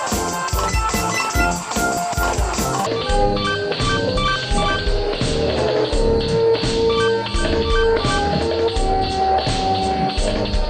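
From 2.86 s to the end, the section is at the wrong speed: it plays at 0.58 times its original rate, so the sound turns slow and deep, roughly ten semitones lower. The likely cause is a clock mismatch. On a spectrogram every harmonic drops and spreads out in time.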